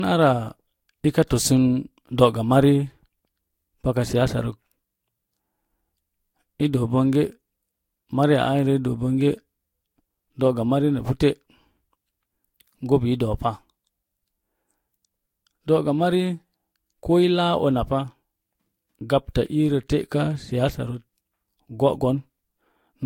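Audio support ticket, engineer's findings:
Generation loss, whole clip: swirly, hollow speech, smeared consonant attacks, nothing above 16.6 kHz. Likely cause: about three Vorbis decode/re-encode passes, each requantising on a shifted frame grid. Worse than a single encode at the 63 kbit/s-class rate the cutoff suggests.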